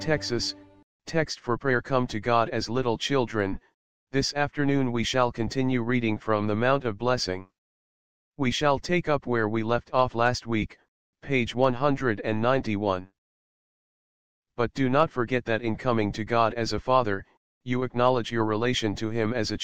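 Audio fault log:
No faults detected in playback.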